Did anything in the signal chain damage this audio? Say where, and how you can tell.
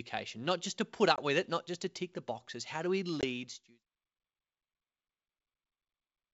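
Yes. Packet loss on an ADPCM call, at the network stage, at 1.16–1.20 s and 3.21–3.25 s: each is a hard-edged 20 ms silence, which fits about two lost packets. The decoder's predictor and step size then mistrack, so the speech resumes slightly distorted, settling within tens of milliseconds.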